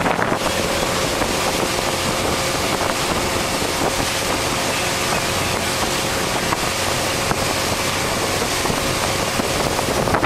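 No technical faults can be heard anywhere in the recording. Nothing breaks up, drops out or distorts at any point.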